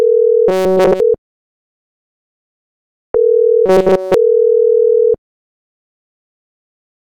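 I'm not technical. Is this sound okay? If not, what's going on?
No. Fresh audio likely arrived too slowly, so the system kept replaying a tiny snippet, producing robotic sound from repeated short buffers: a rigid 188 Hz buzz from 0.48 to 1.00 s and 3.66 to 4.14 s.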